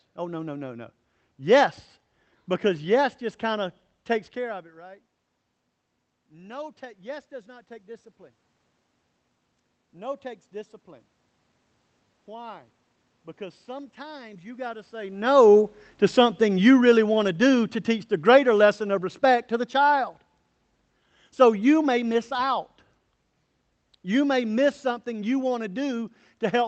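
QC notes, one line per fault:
9.92–15.24 s, automatic gain rising: the automatic gain control judged the input too quiet and lifted its gain by about 7 dB over roughly five seconds. Because the gain acts on the whole signal after the microphone, the speech and the room noise behind it swell together, which is how it differs from the talker moving at around 15 s, where only the voice would change level against a steady background.
15.23–20.22 s, automatic gain falling: right after peaking, the automatic gain control decided the input was now too loud and pulled its gain back down by about 7 dB over about five seconds. The speech starts loud and then sinks, and the room noise sinks with it at the same rate, the signature of a level change applied to the mixed signal rather than a change in how the talker is speaking.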